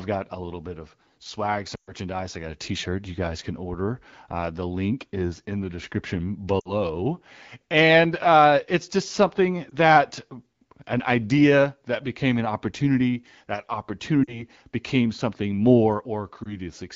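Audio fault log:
1.75 to 16.57 s, lost AMR speech frames: five dropouts, at 1.75 to 1.92 s between "little bit of swag" and "I got", 6.60 to 6.74 s after "is in the description", 9.69 to 9.74 s, 14.23 to 14.42 s before "became something", and 16.43 to 16.57 s. Radio errors corrupted frames, so the decoder replayed the last good pitch and vocal tract settings at falling gain. Each single lost frame gives a brief dip or warble, and longer runs drop to near silence within two frames, the longest concealing about 120 ms, then the sound returns weak or rough.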